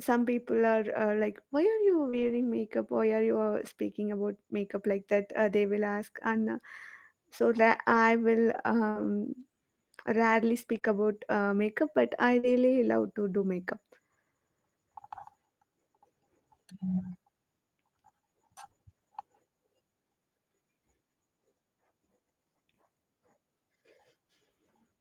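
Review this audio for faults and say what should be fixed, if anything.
At 0.53–0.59 s and 2.13–2.35 s you get a lost packet rebuilt from error correction. The next packets carried low-bitrate copies, so there's no gap, but those 40 ms and 120 ms stretches sound rougher and noisier. More jitter-buffer headroom and a steadier network path would help.

Right before that, at 2.09–2.15 s, there's a short concealed packet loss. About 40 ms never arrived, and the decoder stretched the last sound over the hole, giving a quick smear. Turning up in-band error correction would cover gaps like this.

Between 7.89 and 12.45 s there are scattered short gaps, roughly three, none much over 40 ms. Each was patched by continuing the previous sound, so you hear brief ticks or hiccups across about 2% of that span. Cutting congestion or packet loss on the link would remove them.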